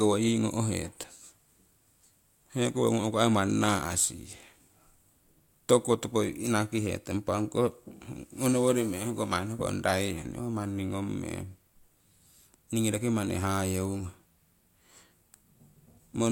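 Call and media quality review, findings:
No audible faults found in this speech recording.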